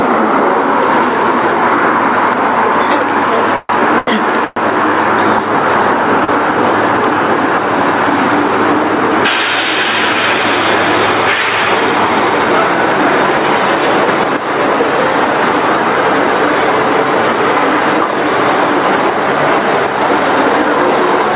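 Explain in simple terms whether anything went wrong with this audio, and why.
Several things went wrong, mostly in how the audio travelled through the call.

Gain pumping runs through the whole clip. The background swells up in the pauses and drops sharply whenever something loud happens. This is likely because the input level was set far too high, with a fast limiter repeatedly pulling it back down and squashing the sound.

A call audio freeze happens from 3.56 to 3.81 s and again from 4.45 to 4.58 s. The sound hangs on as a fading buzz, with a brief silence, then carries on where it left off. The likely cause is delayed packets leaving the receiver's buffer empty.

A short stall from a late packet occurs from 3.99 to 4.09 s and from 6.24 to 6.30 s. One piece of data arrived late, so the last sound was stretched to fill the wait. Nothing is lost, but the sound is held too long with a slight buzz.

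A sudden gain jump appears from 14.08 to 14.37 s and from 19.53 to 19.87 s. The sound and its background noise abruptly become noticeably louder together, likely from a digital volume change applied instantly instead of smoothly.

The call's narrow, phone-like sound is ordinary for this kind of connection.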